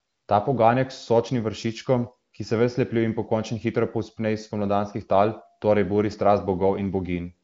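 No technical faults can be heard anywhere in the speech. It comes through the AMR wideband (HD Voice) codec with no more than faint coding damage and nothing above about 7.7 kHz, which fits a high bitrate around 23 kbit/s.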